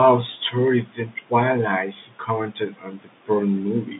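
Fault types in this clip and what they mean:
Speech cut by the noise suppressor: the suppressor mistakes bits of speech for background, so four stretches get pulled down by up to about 19 dB and sound swallowed.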